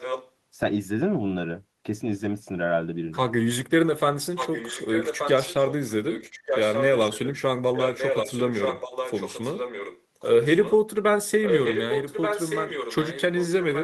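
An echo leak, likely from a far-end loudspeaker whose echo canceller let microphone pickup through, returns the speech 1.18 s late and only slightly quieter at 0 to 0.31 s, 4.35 to 5.91 s, 6.07 to 7.37 s, 7.73 to 10.02 s, 10.19 to 10.76 s (much fainter there), and 11.43 s to the end.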